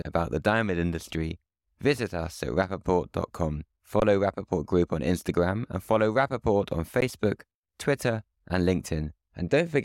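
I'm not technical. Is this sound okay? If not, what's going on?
No. The speech briefly freezes, once from 4.00 to 4.02 s and again at about 7.01 s. This is an underrun with held sample: the playback buffer ran dry, so the output held its last level. About one or two hundredths of a second of speech were skipped each time.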